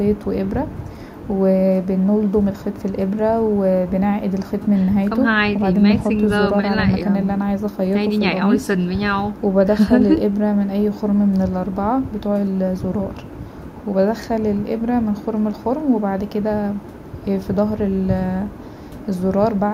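No technical faults detected.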